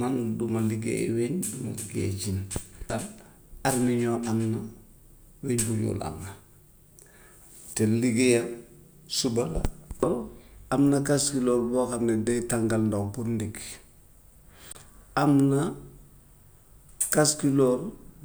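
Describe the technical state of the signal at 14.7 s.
At 14.72 s the output buffer ran dry, an underrun with held sample: with no new data arriving, the converter kept repeating its last value until the stream came back at 14.75 s. For those 26 ms the waveform sits flat, so the speech simply stops with barely a click, then resumes just before "am na". Since playback picks up where it paused, nothing is skipped and the re-entry is soft rather than sharp.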